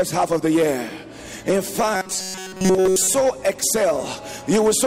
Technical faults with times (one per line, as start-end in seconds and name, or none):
1.94-3.15 robotic sound from repeated short buffers